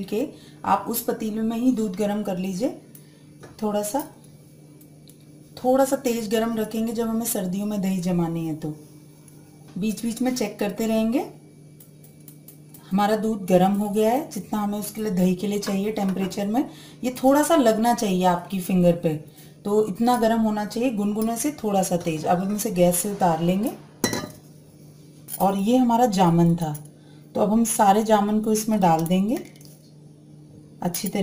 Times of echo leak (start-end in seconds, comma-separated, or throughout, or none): none